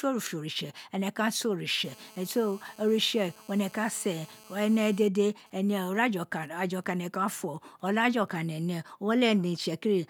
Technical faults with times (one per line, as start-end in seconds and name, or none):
1.84-5.08 GSM phone buzz
5.16-8.40 GSM signalling bursts